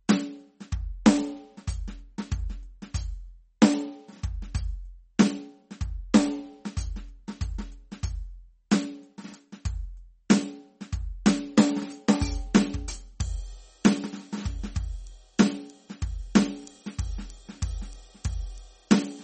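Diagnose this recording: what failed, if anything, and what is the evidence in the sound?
The codec stage is the likely culprit: the music has been squeezed through heavy MP3 compression, with damage plainly audible from start to finish. Nothing survives above 8.4 kHz, so the treble stops dead at a hard ceiling, which fits an encoder starved at around 32 kbps. With so few bits, weak frequency components are dropped and reinstated frame by frame, giving a watery, swirling texture, metallic chirps in the high end, and blurred attacks.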